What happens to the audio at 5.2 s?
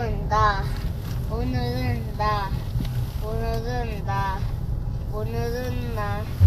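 Vorbis compression affects 5.2 s as it does the whole clip, likely from low-bitrate Vorbis encoding: nothing above 14.2 kHz, and coarsely quantised treble turns hissy and grainy.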